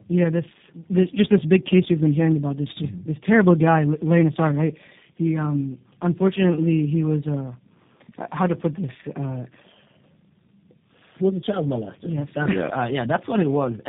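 All the way through, this is tandem speech coding: roughly three speech coders stacked, likely G.729A at both ends, leaving rough, warbly, muffled speech with nothing above 3.8 kHz.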